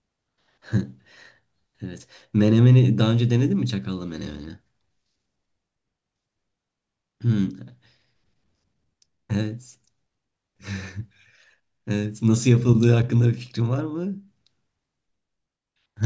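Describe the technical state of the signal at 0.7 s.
At 0.7 s the signal is intact, with no audible dropout, distortion or other fault at that point.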